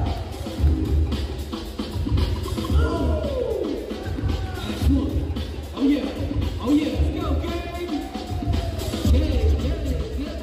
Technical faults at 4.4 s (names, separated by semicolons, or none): none